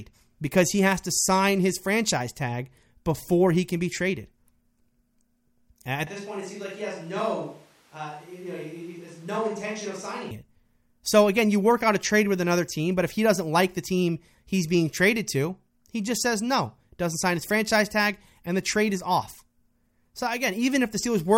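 Speech runs with a clean close-mic sound until 6.07 s, when it turns roomy, hollow and thin in the bass, drops by roughly 10 dB and picks up room noise only about 25 dB below the speech, all abruptly, until an equally sudden return at 10.31 s. That is a switch to a distant microphone, likely a dropout of the close mic. The waveform shows a smaller block with a raised floor, and the spectrogram shows faded low frequencies and smeared reverberant tails.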